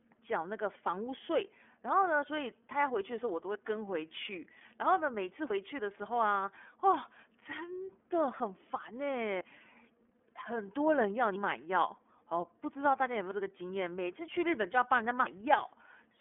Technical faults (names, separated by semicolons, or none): iLBC codec